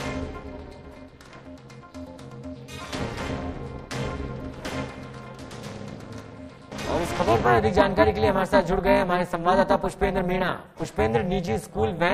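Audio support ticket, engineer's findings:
Harsh metallic buzz across the whole clip, level pumping around 300 times a second, dips about 60 dB deep. Overlap-add ripple in the frame resynthesis stage: window overlap not summing to constant gain, so level swings once per frame.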